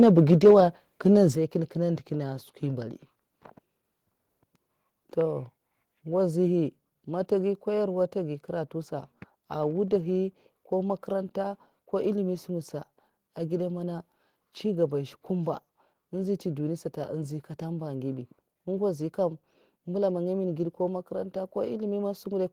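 Right from the start, 0.02 to 0.53 s, you get microphone overload: the loudest syllables have a harsh, crackly edge where the peaks are flattened. It sounds like the input was pushed roughly 3 dB past the converter's ceiling, so a few percent of the samples have their tops sheared off. The likely cause is simply an input level set too hot.

Then there's the microphone volume stepped down, twice. At 0.34 s, still inside that distorted stretch, both speech and background drop abruptly by about 2 dB. At 1.35 s there's a bigger step of about 6 dB. Each is an instant level change rather than a fade, so it reads as a sudden duck of the whole scene. That pattern likely comes from the call software noticing the clipping and lowering the device's input gain, first in a small step and then in a much larger one.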